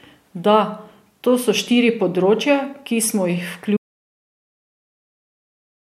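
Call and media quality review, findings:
Audio dropout to silence, 3.77 s to end of clip. Speech cuts off mid-flow into silence with no room tone, and it does not return. Probable component: input or capture path, likely a disconnected device, failed link or stray mute while the encoder kept writing silence. Content after 3.77 s is lost and cannot be recovered.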